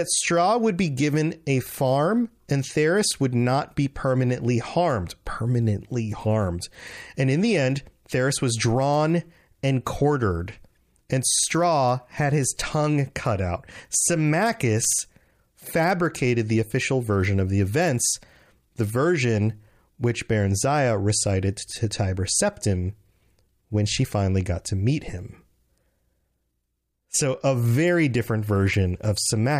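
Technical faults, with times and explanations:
Nothing technical goes wrong anywhere in this speech recording, so there's nothing to list here.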